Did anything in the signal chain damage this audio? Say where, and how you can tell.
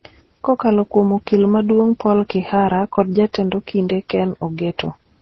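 Yes, at the codec stage, throughout the speech. Nothing survives above 7.1 kHz, and different compression artefacts are heard together. This likely comes from transcoding between lossy codecs, probably low-rate MP3, then Opus, then AAC. Each pass re-encoded earlier damage, and the lowest cut-off remained.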